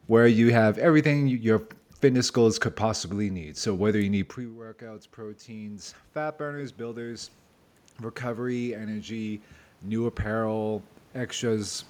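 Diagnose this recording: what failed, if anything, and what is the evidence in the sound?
Automatic gain rising in call processing: the AGC judged the input too quiet and lifted gain about 10 dB over 3.15–7.36 s, then about 5 dB over 8.2–11.85 s. Voice and room noise swell together.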